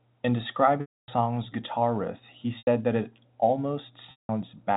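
Packet loss with pitch repetition occurs at 0.81–1.08 s (270 ms), 2.58–2.67 s (90 ms) and 4.11–4.29 s (180 ms). The receiver loops the last pitch period, so the speech holds briefly on a buzzy tone and then fades, rather than cutting straight to silence like a plain dropout.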